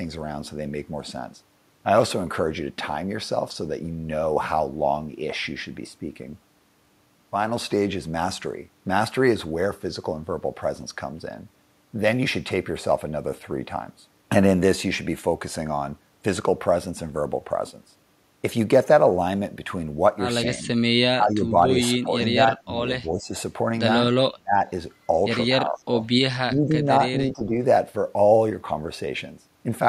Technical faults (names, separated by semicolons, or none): speech suppressed in double talk